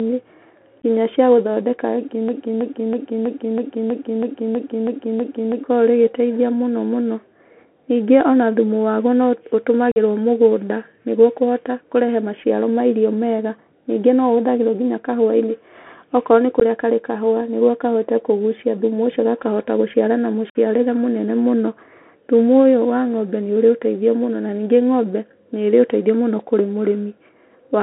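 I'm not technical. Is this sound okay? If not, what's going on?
No, it has a few problems. The whole clip sounds like it went through a Bluetooth CVSD headset codec: a narrow phone-line sound with nothing crisp up top, scratchy s sounds and a grainy hiss under the speech.

From 2.29 to 5.64 s there's a broken-record loop. A bit about a third of a second long repeats ten times back to back, so whatever should have played there is gone. The likely cause is the player or stream getting stuck and resending its last chunk.

There's also unconcealed Bluetooth headset packet loss: tiny dropouts at 0.82 s and 16.6 s, and slightly longer gaps at 9.92 s right after "ona thumu waguo no" and at 20.50 s right after "ũcio gakahota gũciara na". These are brief holes with abrupt edges where bits of audio between headset and phone never arrived.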